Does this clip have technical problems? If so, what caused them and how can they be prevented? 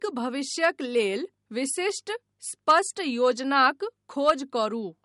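Yes. The speech has nothing above 11.2 kHz for the whole clip, and the dull, smeary artefacts of a low-bitrate MP3 are still audible. That points to low-bitrate audio saved at a high bitrate, likely around 48 kbit/s re-encoded at 256 kbit/s, which can't restore what was removed. To prevent it, encode once from the original source at the final bitrate.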